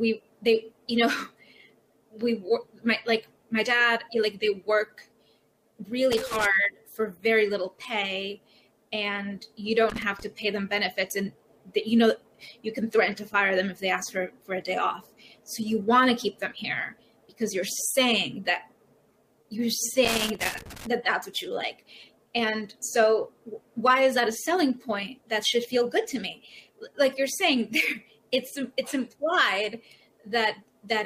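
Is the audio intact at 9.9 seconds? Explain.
No. Loose connector crackle runs from 9.90 to 10.23 s. A worn contact chops the signal, giving an irregular burst of scratchy crackle.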